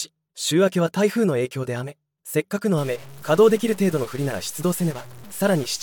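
From 2.78 s to the end, harsh buzzy distortion sets in, likely a stuck bit throwing samples off by steps of about -35 dBFS, with noise creeping into quiet passages.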